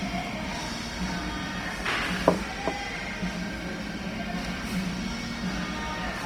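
Throughout the clip, the sound has a grainy, rough texture, with tonal parts turning noisy rather than clean. This is likely Opus compression in its music (CELT) mode. Short of bits, the encoder preserves each band's overall energy but fills the detail with folded copies of lower bands or with noise. The result avoids the watery swirl of MP3 and sounds coarse instead. Bandwidth stays full, reaching about 20.1 kHz, and the plainly audible damage fits a rate near 24 kbps.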